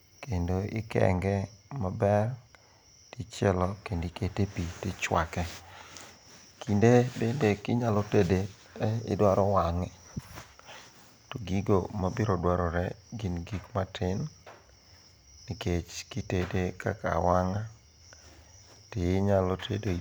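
A recording of speech with no technical fault to report. Nothing in it calls for a time or a cause.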